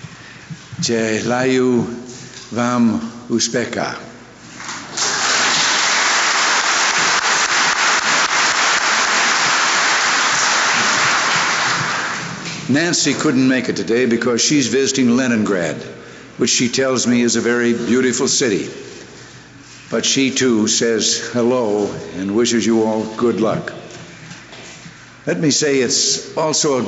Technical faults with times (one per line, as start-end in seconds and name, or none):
none